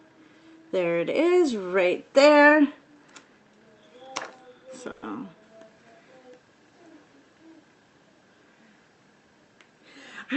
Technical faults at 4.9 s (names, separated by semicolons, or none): call audio freeze